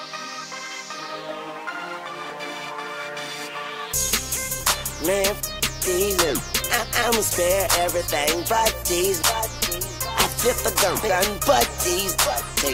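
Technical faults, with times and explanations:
2.30 s, 4.61 s and 6.19 s: dropped buffer (overrun). Each is a small forward jump in the sound with no gap of silence. Around 40 ms of audio goes missing each time, likely because the samples weren't read before the hardware overwrote them.
11.09 s: dropped buffer (overrun). A clearly bigger skip, losing about 150 ms, so the sound jumps further ahead. It likely has the same cause: the buffer was overwritten before collection, and the two sides were spliced together.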